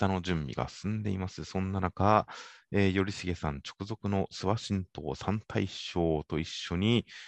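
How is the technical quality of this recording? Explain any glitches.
No technical faults are audible.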